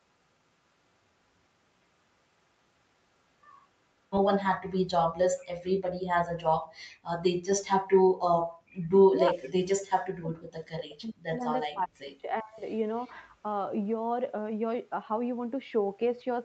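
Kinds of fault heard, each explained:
Echo leak: At 8.72 s a faint, brief copy of the speech appears, delayed by 387 ms and sitting about 30 dB below the main speech. It is likely echo from a far-end loudspeaker that the echo canceller failed to fully remove and that was sent back down the line. The fixed lag and the separate second copy distinguish it from room reverberation, which smears the sound continuously rather than repeating it after a clear gap.
Speech suppressed in double talk: From 8.8 to 11.45 s, and again from 11.69 to 12.64 s, the speech repeatedly dips, at its deepest by around 40 dB, for roughly 2 s and then roughly 1 s in total. It likely comes from an echo canceller that heard both sides at once and turned down everything. Unlike packet loss or dropouts, the sound is attenuated in uneven pieces rather than replaced by clicks or synthetic filler.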